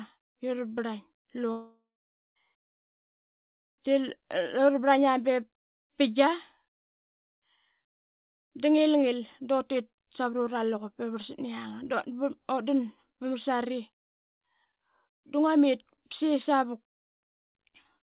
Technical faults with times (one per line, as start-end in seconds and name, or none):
1.52-2.37 long network dropout